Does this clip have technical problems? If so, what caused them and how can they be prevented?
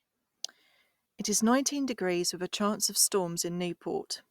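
No, no technical problems can be heard anywhere in this speech recording. With nothing at fault, there is no cause to trace and nothing that needs preventing.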